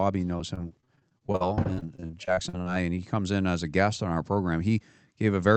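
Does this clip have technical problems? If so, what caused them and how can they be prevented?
Yes. Repeated packet loss (robotic sound) runs from 0.37 to 2.67 s, just before "and he comes in". Many short gaps, the longest about 49 ms, are patched by stretching the preceding sound, so about a quarter of that stretch is synthetic fill. That is why it sounds choppy rather than having clean silent dropouts. A steadier network connection and a larger jitter buffer would prevent it.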